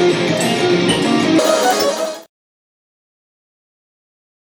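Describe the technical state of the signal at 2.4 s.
At 2.4 s the signal is just leaving a section at the wrong speed that runs from 1.39 s to 2.40 s. Through that second the audio plays back 1.78 times faster than it was recorded, so the pitch rises by close to ten semitones and everything sounds high and hurried. Speed and pitch shift together and abruptly at the boundaries. The likely cause is a segment resampled or clocked against the wrong rate during editing or playback.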